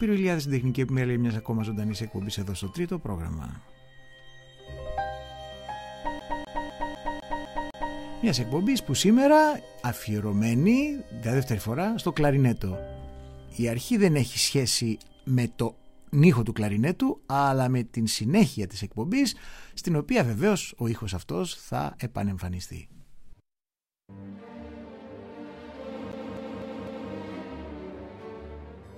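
The audio has a fault of a CD stuck on one turn, and it happens twice. From 6.19 to 7.96 s, the same 0.25 s slice of sound plays seven times. From 26.12 to 27.12 s, a slice of the same length repeats four times. A brief mute cuts in at each jump. A scratch throws the laser back one track whenever the disc comes round to that spot. The result is a fast, even stutter.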